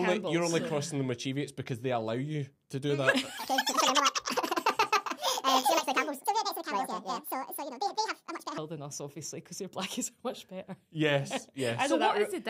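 From 3.38 s to 8.58 s, a section at the wrong speed: the audio runs 1.84 times too fast, pitch rising by about ten semitones, so everything sounds hurried and chipmunk-high. The likely cause is that stretch being played against the wrong clock rate.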